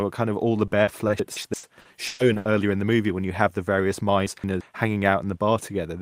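From 0.67 s to 2.47 s there is repeated packet loss, with a robotic sound. Ten gaps occur, the longest 120 ms. Each is patched by stretching the last sound, filling 480 ms in all, about 27% of the span. The result is choppy, with pieces missing.

Inside that stretch, from 1.20 s to 1.54 s, chunks play out of order. One 170 ms chunk arrives one chunk late and plays after its successor. Nothing is lost, but there are three hard joins and the sound jumbles briefly. The same fault recurs from 4.27 s to 4.61 s.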